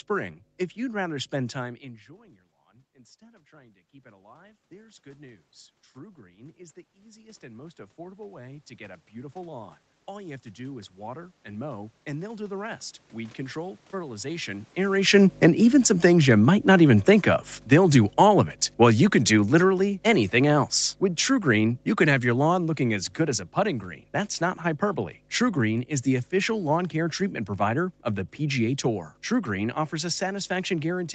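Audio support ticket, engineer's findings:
Mains hum, throughout. Steady low 50 Hz tone, roughly 25 dB under the speech, with some low harmonics. Likely a ground loop or nearby transformer coupling power into the analogue input. Spectrogram: unbroken horizontal line at 50 Hz with weaker lines at multiples, visible through pauses. Waveform: fine periodic ripple on the baseline between phrases.

Automatic gain rising, 1.61 to 14.53 s. Level drops about 24 dB at 1.6 s as the talker moves back, then climbs slowly. The AGC reads the input as too quiet and adds about 23 dB over roughly 13 s. Speech, room noise and hum swell together. Waveform: slow upward ramp of the envelope. Spectrogram: background and hum lines brighten gradually.

Automatic gain falling, 14.88 to 23.46 s. The talker comes close at about 14.5 s while gain is still high, so speech arrives loud. The AGC then backs off about 17 dB over roughly 8.6 s, and the speech, background and hum sink together. 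Waveform: steady downward envelope taper. Spectrogram: whole frame dims evenly.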